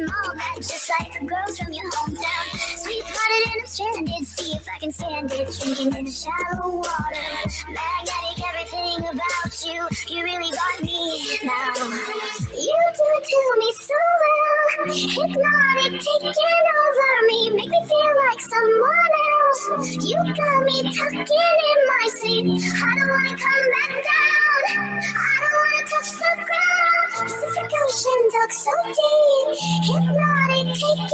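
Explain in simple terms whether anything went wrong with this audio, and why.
A noise suppressor built for speech was left on for the whole clip. It mistakes steady sound for noise, so the level keeps sinking and recovering.

In several places the noise suppressor cut the sound itself, pushing it down harder than the rest. This happens from 0.26 to 3.17 s, 3.59 to 6.62 s and 7.04 to 10.15 s. Shorter dips follow at 10.74 to 10.91 s, 12.40 to 12.58 s, 13.73 to 13.90 s, 18.38 to 18.53 s and 25.84 to 26.45 s. The first three stretches drop the deepest.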